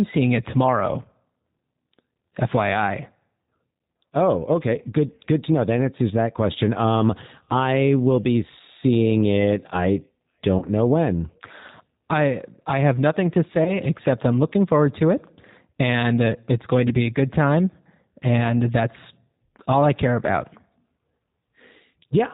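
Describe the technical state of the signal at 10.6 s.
From 10.58 to 10.70 s the speech smears into a stretched, fading sound and sounds weak and distorted for a moment after. This is VoIP packet loss concealed by the speech codec: about 40 ms of data went missing, and the decoder filled the gap by extending its last pitch and filter with falling gain, then took time to rebuild.

Underneath, the voice sounds rough, slightly synthetic and muffled, with nothing above 4 kHz. That is the G.729 codec (the G.729A variant) at 8 kbit/s, which reconstructs speech from a vocal tract model and a few pulses per frame. Its damage is plainly audible here.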